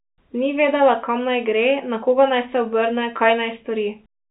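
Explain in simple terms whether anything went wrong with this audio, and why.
Nothing went wrong with this speech; it sounds like an ordinary telephone line, which is why the highest sounds above about 3.9 kHz are missing.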